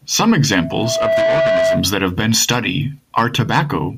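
Loudspeaker feedback squeal runs from 0.50 to 1.92 s, ending just before "that have been study". The microphone is hearing its own loudspeaker, and the loop gain tops one at 654 Hz, so that single tone swells over roughly three-quarters of a second to about 5 dB above the speech.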